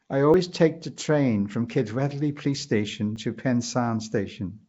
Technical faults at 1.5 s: Nellymoser compression; dropped buffer (overrun)

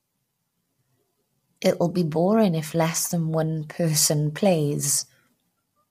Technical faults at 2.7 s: low-delay AAC compression

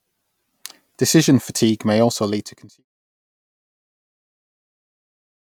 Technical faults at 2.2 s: none

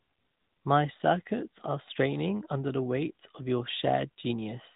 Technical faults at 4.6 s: AMR narrowband mobile codec

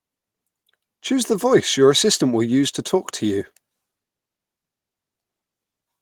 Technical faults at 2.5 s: none

